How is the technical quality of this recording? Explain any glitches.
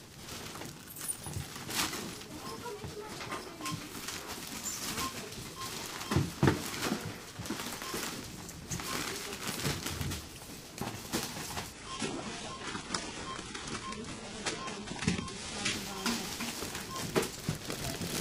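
Quality takes one noticeable dip, from 11.73 to 15.73 s, where the adaptive stream dropped to a lower bitrate. The connection slowed, so the player swapped in a leaner encode. For about 4 seconds the treble thins, with nothing above 11.1 kHz and more codec artefacts. The sudden drop, with no gap, points to a switch from roughly 96 kbit/s AAC to a very low-rate HE-AAC stream.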